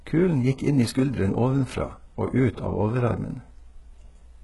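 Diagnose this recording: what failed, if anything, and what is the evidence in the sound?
Codec stage is where I'd look. Across the whole speech clip the top end stops dead at about 11.5 kHz, and the treble under that sounds synthetic. The s sounds come out gritty and a bit lispy, with a metallic sheen, and the damage is heavy. That's likely HE-AAC compression at a very low rate, consistent with roughly 12 kbps. The codec only really codes the lower band and fakes the highs by copying lower bands upward, so the harmonics don't line up.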